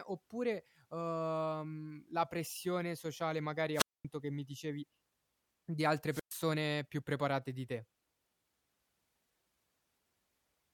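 Two wireless microphone squelch dropouts break the speech, at 3.73 to 4.05 s (about 230 ms muted) and 6.09 to 6.31 s (about 118 ms). The fading radio signal brings a brief hiss surge, seen as broadband haze, then the squelch leaves a flat waveform gap before the speech resumes.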